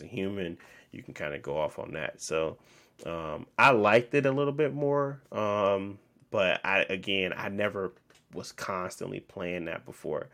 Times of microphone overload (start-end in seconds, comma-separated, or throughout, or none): 3.61-3.97